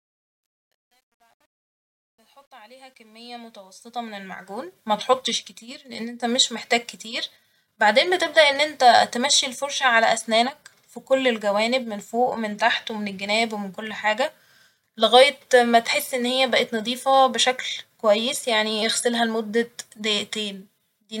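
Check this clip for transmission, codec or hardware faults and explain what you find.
One fault is present, on the fade-in at the start of the speech. From 0.0 to 4.89 s, just before "متحطش كتير لإن إنت", there is truncation distortion on a fade: the gain stage drops low bits without dither, consistent with about 10-bit resolution, so the rising level steps coarsely. The sound is gritty, worst from 0.0 to 3.77 s, and the fade only smooths out near 4.89 s.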